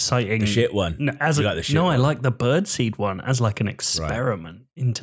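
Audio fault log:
Nothing stood out on listening to this speech recording.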